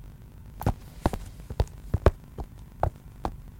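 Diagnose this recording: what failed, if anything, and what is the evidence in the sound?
What failed is a block size mismatch (truncated) at the driver or buffer stage, and it runs through the whole clip. There's a steady 50 Hz buzz under the sound, and everything plays back about 1.16 times too fast. That fits an upstream stage writing 1024-sample blocks while the next stage reads shorter ones and drops the tail of each. Each chop lands at the block rate, which gives the buzz, and the missing audio is what speeds things up.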